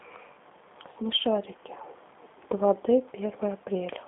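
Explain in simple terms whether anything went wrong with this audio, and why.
The speech sounds muffled, slightly rough and a little robotic from start to finish, with no crisp high end. That comes from the G.729 codec, a phone-call format that rebuilds speech from a simplified model and throws away everything above about 3.8 kHz.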